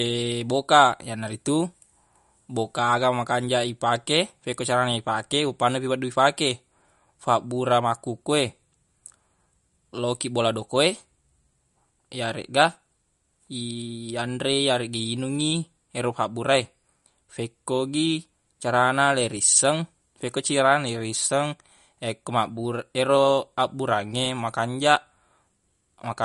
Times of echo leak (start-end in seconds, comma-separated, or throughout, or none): none